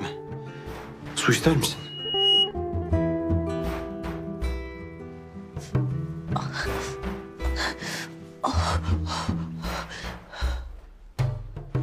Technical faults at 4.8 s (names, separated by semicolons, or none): none